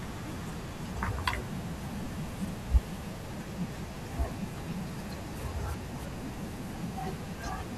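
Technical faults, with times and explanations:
2.45–2.50 s and 4.91–5.11 s, frames out of order: neighbouring 23 ms and 93 ms blocks play swapped, giving a garbled flutter; unlike a dropout, no time is lost.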